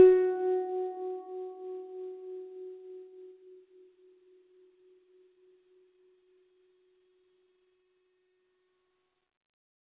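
Nothing goes wrong anywhere in this music; the top end simply stops at 4 kHz because of the narrowband call path it came through, which fits a G.711 mu-law codec running at 64 kbps.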